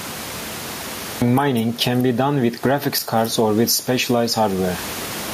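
From 0 to 1.22 s there is digital silence, a flat line on the waveform and a blank spectrogram. At 1.22 s the speech appears abruptly mid-sound, a cut-off start with no attack or fade, shown as a sheer vertical edge.

Gain pumping runs throughout. Level swings of roughly 20 dB squash loud and soft passages together, and the room noise sits about 29 dB below the speech. The likely cause is gain set far too high, with a fast limiter pulling it down on each loud sound. The waveform looks flattened, and the spectrogram's noise floor brightens between phrases.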